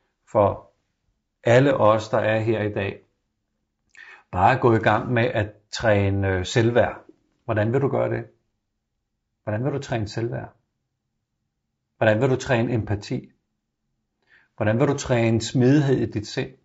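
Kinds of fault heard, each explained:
Low-delay AAC compression: the speech is rough and grainy throughout, with noise between the harmonics and a thin, synthetic top band. The likely cause is AAC-ELD, whose short frames resolve pitch harmonics poorly. The damage fits a bitrate around 32 kbps.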